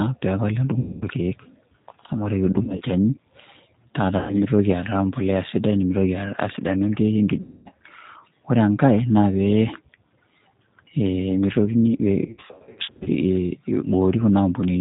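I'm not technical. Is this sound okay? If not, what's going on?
No. The whole recording has passed through the G.729 codec, a low-rate internet-phone format that rebuilds speech from a simplified model of the voice. It keeps nothing above about 4 kHz, so the speech sounds muffled, telephone-like, slightly rough and synthetic throughout.

There is also VoIP packet loss concealed by the speech codec at 0.79–1.03 s, 2.53–2.84 s, 4.18–4.35 s, 7.41–7.68 s and 12.25–13.09 s. Pieces of the signal went missing, and the decoder filled each gap by stretching the last sound into a buzzy tone or a coloured noise that fades. The 2.53 s and 12.25 s stretches are broken up by several short gaps, and the speech stays weak briefly afterwards.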